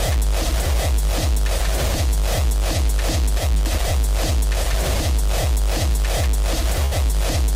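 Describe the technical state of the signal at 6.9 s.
A burst of packet loss spans 6.85 to 6.94 s. Consecutive packets failed to arrive in time, so the receiver extended the last sound for 61 ms while turning it down, then resumed further on, skipping 60 ms. It is heard as a brief fading smear, then a jump.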